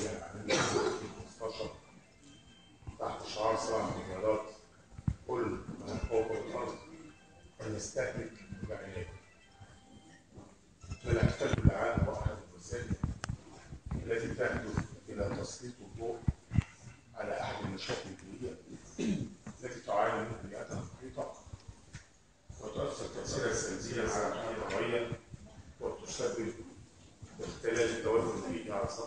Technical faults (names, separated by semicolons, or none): doubled audio track